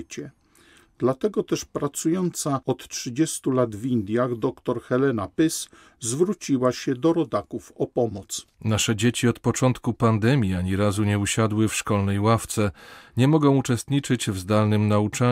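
No technical faults are audible.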